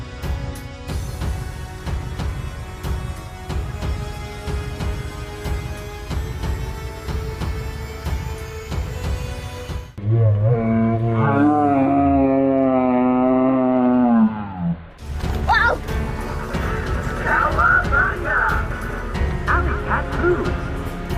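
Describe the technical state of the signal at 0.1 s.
At 0.1 s the signal is intact, with no audible technical fault at that moment.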